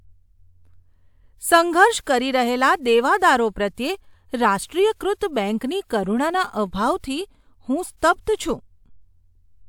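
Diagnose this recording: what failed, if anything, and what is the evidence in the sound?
Listening closely to the speech, nothing stood out that would point to a failure at any stage of the recording or playback chain.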